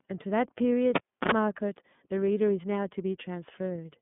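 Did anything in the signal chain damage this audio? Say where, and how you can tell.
Yes. At the codec stage, the whole clip passes through the iLBC codec. Nothing reaches above 3.8 kHz, and the line band sits at roughly 150 Hz to 3.5 kHz. The speech also has a rough, synthetic grain that changes on a 30 ms frame grid, which fits iLBC's 13.33 kbps mode. Simple band-limiting would dull the sound without adding that frame-wise roughness.

In the analogue wiring, a cable was pulled and plugged in between 0.95 and 1.31 s. A pop is followed by about 0.31 s of near silence, then 62 ms of 60 Hz mains buzz as the tip makes contact, and a second pop as the sound returns. A network dropout would leave a gap without the pops or the hum.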